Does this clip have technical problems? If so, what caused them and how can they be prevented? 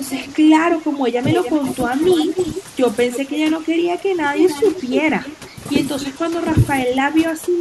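Yes. Overdone noise removal runs through the whole clip. A noise reduction stage set far too aggressively pulls individual frequency bands down to nothing whenever they sit near its noise estimate. The background collapses into near silence dotted with twinkling specks, and quieter parts of the speech are stripped along with it. Setting the suppressor to a gentler reduction depth, so it never fully removes a band, would avoid this.

Echo leak appears from 0.09 to 0.35 s, 1.3 to 3.55 s, 4.39 to 5.36 s and 6.0 to 6.16 s. A delayed copy of the speech arrives 284 to 294 ms behind it. It is faint in the first burst, about 20 dB below the speech, rises to only about 5 dB below in the two longer stretches, and sits about 10 dB down in the last. This is likely a far end playing the call over a loudspeaker, with its echo canceller failing to remove what its microphone picked up. Using a headset, or improving the canceller's convergence at that end, would prevent it.

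Speech suppressed in double talk occurs between 0.81 and 2.02 s and again from 6.15 to 7.6 s, overlapping the echo. The talker's level dips by as much as about 10 dB. These total only about a tenth of a second in the first span but well over half a second in the second. This is likely an echo canceller unable to separate the local talker from loudspeaker echo while both sides spoke, so it turned everything down. Full-duplex echo cancellation with reliable double-talk detection prevents it.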